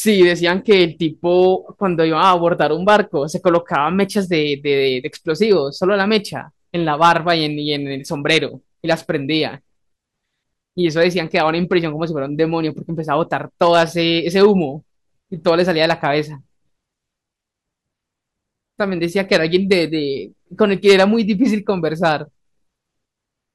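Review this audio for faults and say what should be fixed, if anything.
Hard clipping runs throughout: the signal was driven about 6 dB past what a stage could pass, so its peaks were cut flat. Only a small fraction of samples hit that ceiling, so it comes through as brief crackle and harsh high harmonics on the loudest speech peaks. To prevent it, reduce the gain ahead of the converter or any fixed-range stage so peaks keep headroom below full scale.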